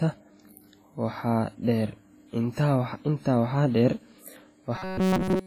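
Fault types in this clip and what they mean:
WMA compression: The whole clip is ringing and washy, with hiss that swells and fades with the speech. Heavy damage like this is likely from low-bitrate WMA, around 24 kbps. Unlike steady background hiss, the noise tracks the signal.
Robotic sound from repeated short buffers: From 4.76 s to the end, the speech turns into a rigid metallic buzz fixed near 188 Hz, likely from a segment of roughly 5 ms replaying through most of that stretch. Pitch shifting would keep natural intonation instead.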